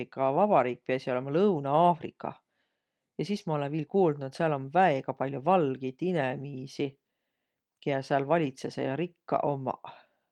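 A speech recording, with nothing technically wrong with it.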